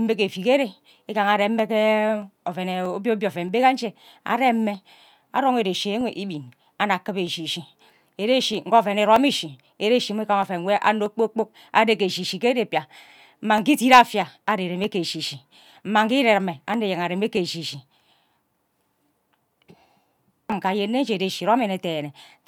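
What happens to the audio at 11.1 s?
At 11.1 s a click falls on the speech, one of a steady run recurring every 0.63 s from 0.33 s to 22.4 s. These clock drift buffer slips likely come from two clocks about 500 ppm apart, dropping or repeating around 15 samples at each slip.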